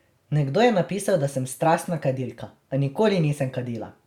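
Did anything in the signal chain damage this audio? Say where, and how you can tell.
No, nothing in the signal chain audibly damaged this speech recording. No stage between capture and playback leaves a mark that can be heard anywhere in the clip.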